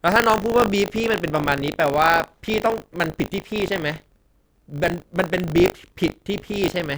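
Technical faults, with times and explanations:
Throughout, buffer tearing: writer and reader cross every period, splicing a small slice of speech about 40 ms old into each buffer, causing a 50 Hz robotic rattle.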